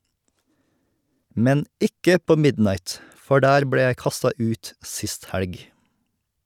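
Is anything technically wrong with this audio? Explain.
No, no technical faults detected.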